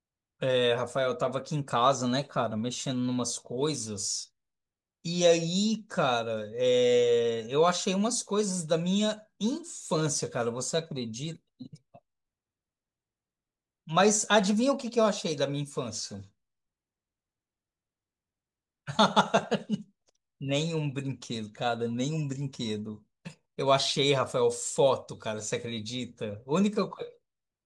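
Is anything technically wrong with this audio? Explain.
No, nothing technically wrong stands out anywhere in this speech recording, so there's nothing here to flag.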